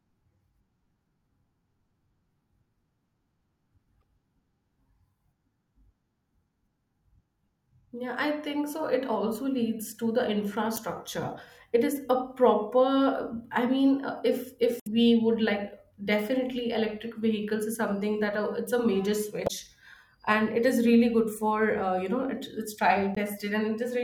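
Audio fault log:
4.00–4.03 s, 10.74–10.79 s (after "also leads to the"), 14.80–14.87 s (after "I mean uh if"), 19.44–19.51 s (after "a major"), 23.14–23.19 s: damaged data in a compressed stream. Corrupted bytes make the decoder misread frames and lose sync while hunting for the next header, producing brief chirps and blips.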